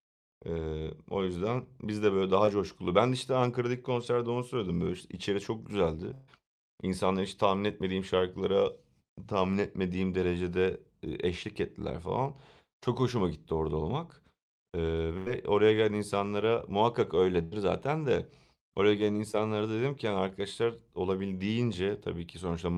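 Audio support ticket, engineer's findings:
Short concealed packet loss at 2.45–2.49 s and 19.32–19.36 s (the latter just before "dedim ki yani arkadaşlar"). About 20 ms of speech is missing, bridged by a fill continuing the last sound from the jitter buffer/decoder concealment. The result is a brief smear or wobble, not an audible gap. That brevity separates it from the bursts.

Burst of packet loss at 6.13–6.29 s (about 140 ms missing), at 15.17–15.31 s (80 ms, just before "oraya gelen insanlara muhakkak") and at 17.43–17.54 s (80 ms, between that phrase and "zaten de oraya gelen"). Consecutive packets were lost at the network/receiver. Concealment extends the last sound as a fading buzz or hiss, then speech resumes with a chunk absent.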